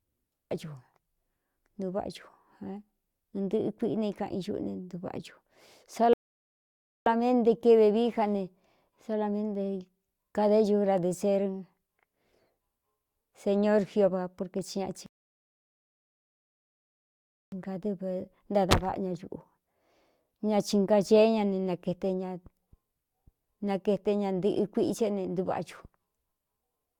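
At 6.13 s and again at 15.06 s the speech hits a rebuffering stall: playback drains its buffer and falls silent for 0.93 s, then 2.46 s, resuming seamlessly, the first before "keve vií".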